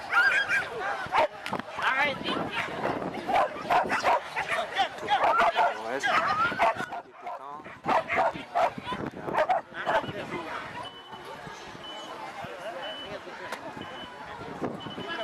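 Gain settings were likely switched without a ramp, causing two sudden gain jumps: sound and background drop together by about 12 dB from 6.84 to 7.84 s, and by about 6 dB from 10.88 to 11.12 s.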